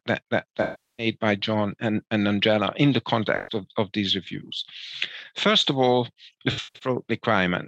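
The audio drops out three times from AAC frame loss with concealment. The decoder patches each gap from the last good spectrum, so the sound turns smeared and noisy. The first gap runs 0.62 to 1.07 s, about 360 ms. The second, 3.36 to 3.56 s, is a brief phasey smear. The third, 6.51 to 6.89 s, is broken up, with its longest hole around 150 ms.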